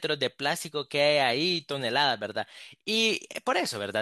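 No technical faults are audible.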